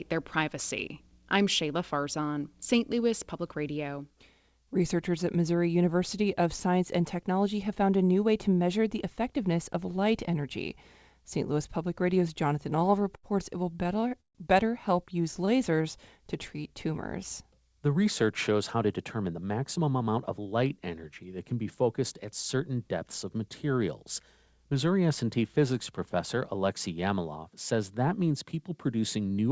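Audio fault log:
12.70 to 15.61 s, repeated stalls (stutter): three bursts of stuttering, at 12.70 to 13.25 s, 13.73 to 14.37 s and 15.23 to 15.61 s. Packets arrived late and the jitter buffer kept running dry, so the receiver stretched the last sound across each wait. The longest hold, about 140 ms, fades, and little is lost, but the speech drags.
15.56 to 16.87 s, jitter buffer slow-down: right after the stutter the receiver rebuilt its reserve by repeating single pitch periods and slivers of pauses. About 88 ms was added, so the speech plays at roughly 94% speed with unchanged pitch, sounding slightly drawn out.
18.75 to 20.53 s, jitter buffer speed-up: the buffer held more audio than it aims for. The receiver trimmed short runs of pitch periods, around a fifth of a second in total, so the speech runs about 10% fast at the same pitch and sounds hurried.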